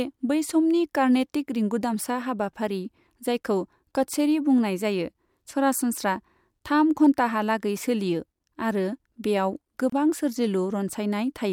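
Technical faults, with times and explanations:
9.90 to 9.92 s, gap at a join of encoded pieces: the speech drops out for about 28 ms with smeared edges, then picks up where it left off. That's encoder start delay and last-frame padding left untrimmed where two separately encoded pieces, likely about 10 s long, were butted together.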